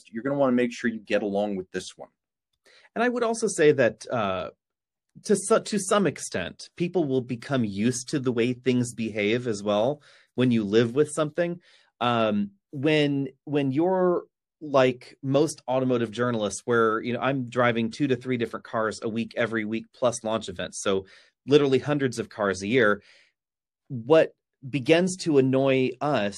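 Pre-echo appears from 7.40 to 7.42 s in this speech: a short hiss of about 22 ms rises by about 17 dB just before a sharp attack, which then sounds softened. The transform codec spread quantisation noise sized for the loud onset across its whole block, including the quiet gap ahead of it. The spread fits a block of about 36 ms and suggests the encoder never switched to short blocks to contain the transient.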